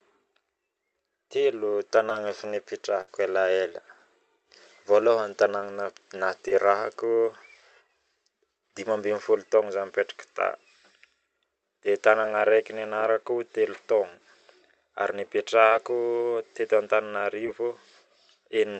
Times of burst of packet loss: 3.01-3.08, 15.66-15.72

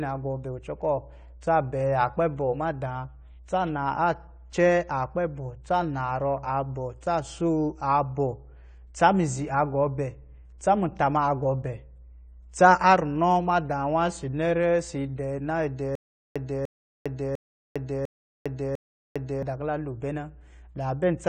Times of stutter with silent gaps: 15.95-19.43

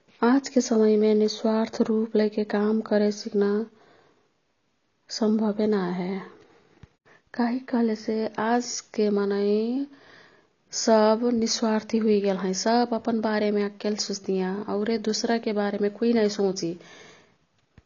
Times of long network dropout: none

